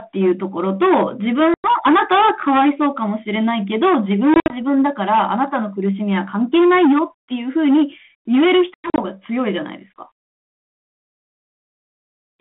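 Hard clipping runs through the whole clip. The speech was driven about 11 dB past what the signal path could carry, so every peak was cut flat, on the order of 7 percent of samples. Those squared-off tops add harmonics high in the spectrum, heard as a harsh fuzz over every loud syllable rather than occasional crackle. In the narrow telephone band, roughly 150 Hz to 3.5 kHz, which points to a 32 kbit/s G.726 link, the rasp sits on top of the speech.

Packet loss on an ADPCM call first appears from 1.54 to 1.70 s, where about 100 ms of audio is missing, a handful of packets. A second burst, 4.34 to 4.57 s, loses about 100 ms in pieces spread over 160 ms, the longest gap 60 ms. The third, 8.74 to 9.04 s, drops about 160 ms across 240 ms, with one 100 ms hole. Each gap is filled with hard-edged silence. Because the receiving decoder's predictor and step size lose track of the sender's, the speech comes back slightly distorted before settling.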